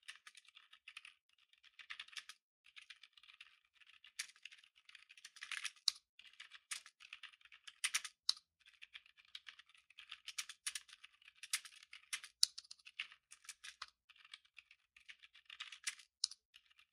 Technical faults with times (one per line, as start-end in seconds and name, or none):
none